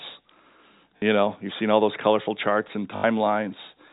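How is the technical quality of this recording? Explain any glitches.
The speech carries two short dropouts where packet loss with the last packet repeated fills the gaps, over a telephone-band G.711 signal cut off at 4 kHz. At 0.98 s (40 ms) and 2.96–3.04 s (80 ms), lost packets were replaced by replaying the previous one. On the longer gap, the repeats buzz at about 50 Hz, which fits 20 ms packets.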